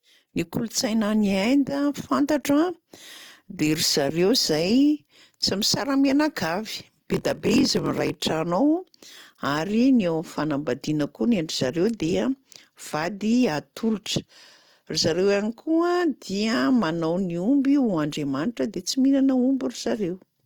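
Throughout the clip the speech has a rough, grainy texture, with tones turning noisy rather than clean, while the band still reaches about 20.1 kHz. That points to Opus compression, likely in its music (CELT) mode at a low bitrate near 24 kbps. When bits ran short, the encoder kept each band's energy but filled detail with folded or noise content. That is why the damage sounds hissy and coarse instead of swirly or muffled.

From 6.75 to 8.15 s a block size mismatch (padded) appears. One stage delivered shorter blocks than the next expected, which fits a 1024-sample read, and the remainder of each block was filled with silence. The tiny gaps repeat at about 43.1 Hz, giving a low buzz over the speech. The extra gaps also stretch time, so the passage plays at about 0.94 times normal speed while keeping its timbre.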